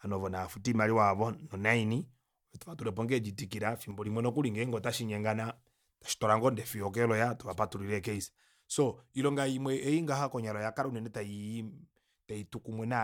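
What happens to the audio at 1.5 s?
Nothing goes wrong at 1.5 s; the speech runs through that moment intact, with no dropout, click or distortion to be heard.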